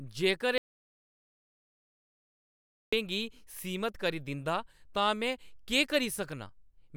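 At 0.58 s the speech cuts off abruptly and does not return until 2.93 s: an audio dropout to silence lasting about 2.35 s. The likely cause is lost input, such as a disconnected device, a broken link or an accidental mute, while recording carried on writing zeros. Unlike a natural pause, or a noise gate that leaves faint room tone and eases in, the gap is dead digital silence with hard edges, and whatever was said in it is gone.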